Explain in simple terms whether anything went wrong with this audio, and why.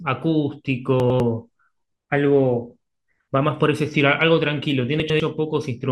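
Chunks out of order, at 1.0 to 1.2 s and again at 5.0 to 5.2 s. Each time, a tenth-of-a-second piece of the speech arrived late and played after the piece meant to follow it. Nothing is missing, but the swap sounds jumbled.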